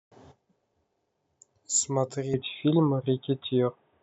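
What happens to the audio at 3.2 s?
At 3.2 s the speech sounds dull and boxy. That narrowed tone starts abruptly at 2.34 s with no gap in the sound and lasts to the end of the clip. Nothing comes through above 3.8 kHz, the level shifts by around 5 dB, and a faint new background noise sits well below the speech. The likely cause is an input switched to a poorer device, such as another microphone or a headset call profile, whose narrower band and own noise replace the original pickup.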